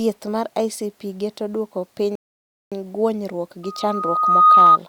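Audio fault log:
2.15 to 2.72 s, rebuffering stall: after "geto duoko piny" the speech drops to flat silence for about 0.56 s, then carries on exactly where it halted. Playback ran dry and waited for more data. Nothing is skipped, only delay added, seen as a flat silent gap in the waveform.
3.63 to 4.78 s, loudspeaker feedback squeal: after "geto duoko piny guonyruok" a single 1.2 kHz tone swells over roughly one second to about 15 dB above the speech. The microphone is re-amplifying its own loudspeaker output at that frequency. A spectrogram shows one bright horizontal line thickening.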